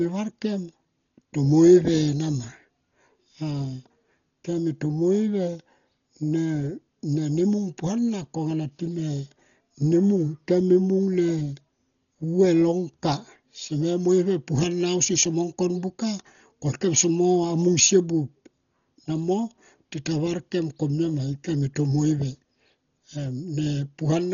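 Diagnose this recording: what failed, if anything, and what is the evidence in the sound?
Dolby Digital compression throughout, codec stage: dull speech, nothing above 7 kHz, rough fluttering noise fill, likely from a starved bitrate near 32 kbps leaving frequency lines uncoded.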